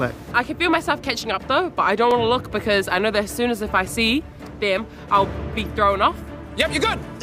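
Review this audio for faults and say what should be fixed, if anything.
At 2.11 s there is a single sharp tick where the sound drops out for about 2.7 ms and snaps straight back. This is a block of digital silence: a run of samples was output as zeros, and because the signal jumps to zero and returns with no fade, each edge forms a step that the ear hears as one click. A dropout this short and clean fits a single missed 128-sample buffer, most likely because the audio callback did not finish filling the buffer in time. To prevent it, keep the processing within its real-time deadline, with a larger buffer or lighter per-buffer work, and replace any invalid values before output.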